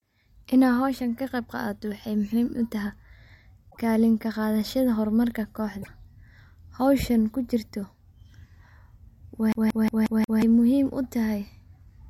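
A speech recording with two brief glitches, at 3.70 to 3.78 s and 5.81 to 5.88 s, where the sound jumps ahead, likely a broken MP3 bit reservoir, with cut frames fitting a 26.1 ms frame size. From 9.52 to 10.42 s, a 0.18 s fragment stutters five times with short mutes before "muhiim utahay", the skipping effect of a CD stuck on one turn.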